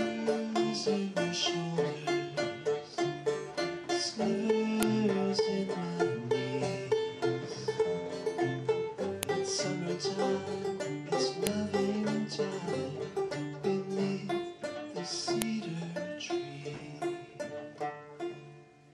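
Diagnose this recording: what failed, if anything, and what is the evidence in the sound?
File header played as audio, a storage fault: clicks at 4.83, 9.23, 11.47 and 15.42 s where joined WAV pieces kept their header bytes; they ignore the signal, unlike clipping.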